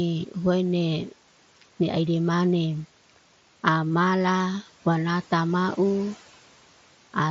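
At 3.93 s, one voice packet between headset and phone went missing, and the receiver filled the gap of about 7.5 ms by repeating the closest-matching stretch of recent waveform. This concealed Bluetooth headset packet loss fits a single dropped packet, leaving only a faint, nearly hidden blip in the speech.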